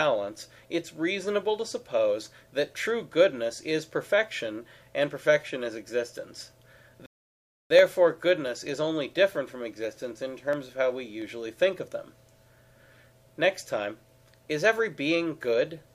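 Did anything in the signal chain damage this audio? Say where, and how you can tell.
Yes. At the driver or buffer stage, clock drift buffer slips cause a regular click about every 0.69 s from 0.28 s to 15.33 s, roughly twenty in all. Each is a small jump of a few samples. Two devices likely run on separate clocks about 300 ppm apart.

At the playback stage, a rebuffering stall cuts the sound to silence from 7.06 s to 7.71 s. The audio then resumes exactly where it stopped. The player ran out of downloaded data and waited, adding 643 ms without losing anything.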